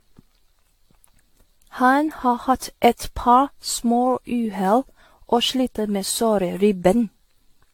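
From start to end the speech carries generation loss: a swirling, hollow smear with softened consonant attacks. This most likely comes from roughly ten successive decode and re-encode passes through AAC-LC, each quantising on a shifted frame grid so that noise and spectral gaps pile up. The band reaching 19 kHz points to a moderate rate near 96 kbit/s, which is what separates this from a single low-bitrate encode, where the top end would be cut much lower.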